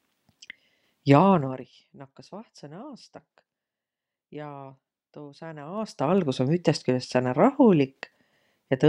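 Speech, with zipper noise at 1.30 to 1.72 s as the level drops by roughly 20 dB, and at 5.60 to 6.26 s, just after "tuu sääne", as it rises by a similar amount. Unsmoothed 2 dB gain steps, around 20 to 30 per second, each click audibly.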